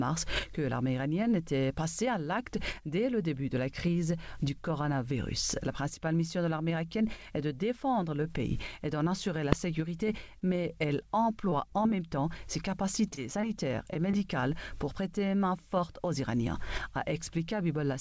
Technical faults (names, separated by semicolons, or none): invalid numbers at full scale; short stall from a late packet; short concealed packet loss; repeated packet loss (robotic sound)